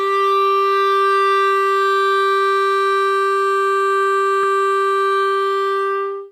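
At 4.43 s the music jumps ahead about 70 ms, compressed frames skipped, likely a couple of 32 ms frames. It's seen as a waveform discontinuity.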